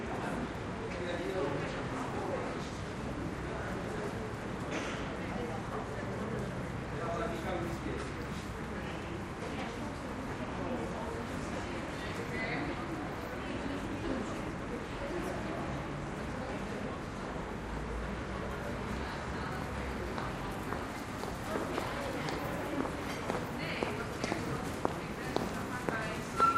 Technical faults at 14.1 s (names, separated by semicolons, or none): none